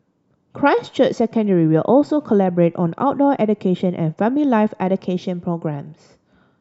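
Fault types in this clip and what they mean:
No technical faults are present.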